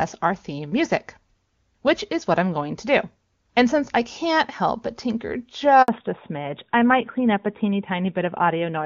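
At 5.82 s the speech cuts out for 60 ms and resumes at 5.88 s. This is a handover gap: the call was moved between networks, and no speech frames arrived during the switch, so that moment of sound is simply lost.

From 5.88 s to the end, the speech turns duller and boxier, with nothing left above 4 kHz. This is a fallback to narrowband: after the handover, the call dropped from the clean wideband HD Voice coding heard earlier to an older narrowband codec, likely AMR-NB at its 12.2 kbit/s top rate.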